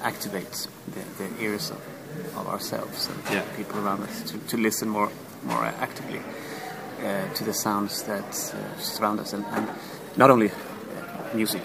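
From 8.89 s to the end at 11.64 s the audio becomes a time-stretched section, running about 1.61 times faster while its pitch holds steady. The pace jumps abruptly and the sound turns rushed, likely because software squeezed this stretch to fit a shorter length by dropping short pieces. On a spectrogram the harmonic bands stay at the same heights but compress horizontally, and the waveform shows envelope shapes crowded together with small seams where pieces were removed.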